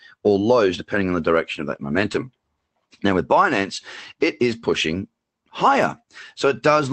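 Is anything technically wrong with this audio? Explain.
No, nothing in this speech clip points to a technical problem. It sounds like it came through a WebRTC call path with the Opus codec, whose top end rolls off at about 8 kHz, as expected for that kind of connection.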